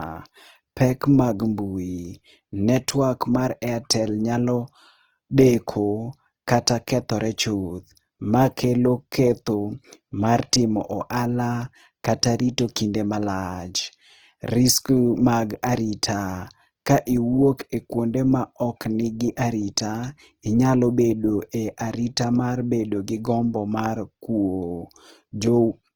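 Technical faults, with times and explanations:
Throughout, Opus compression: the speech sounds rough and grainy, with a noisy, hissy texture filling in where detail is missing, though the highs stay present up to about 20.4 kHz. This is likely Opus in its music mode at a low bitrate, around 16 kbps, keeping each band's energy but filling it with folded or noise content. A spectrogram would show a full band with smeared, speckled texture instead of clean harmonics and few empty holes.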